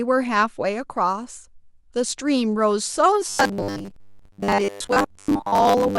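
Speech that, from 3.29 s to the end, turns into a rigid metallic buzz locked near 100 Hz: robotic sound from repeated short buffers, likely audio arriving too seldom, with roughly 10 ms chunks looped over most of the skipped audio.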